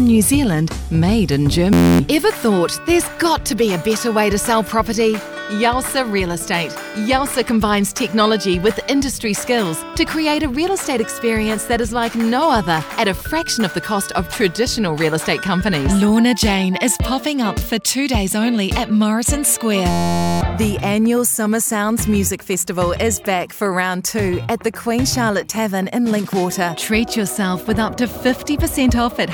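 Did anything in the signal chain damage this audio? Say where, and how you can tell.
Yes, a system hang loop in the driver or buffer stage. From 1.73 to 2.00 s and again from 19.91 to 20.41 s the audio turns into a steady buzz at 86.1 Hz. Each cycle is one 11.61 ms fragment repeated exactly, which fits a 512-sample buffer. The host stalled while the hardware kept replaying the same ring buffer, so about 0.3 s and 0.5 s of real audio were lost.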